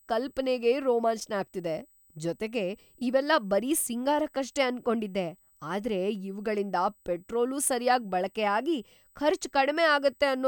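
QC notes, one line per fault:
Throughout, USB whine: a fixed high tone at 8 kHz, strongest at 16 kHz and roughly 35 dB below the speech, from USB frame current leaking through power or ground.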